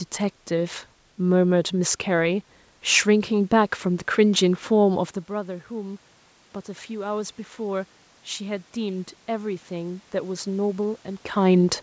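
Speech with automatic gain rising from 6.65 to 11.09 s. After the talker moves back around 5 s, the level drops about 14 dB, so gain climbs about 6 dB, swelling voice and background together.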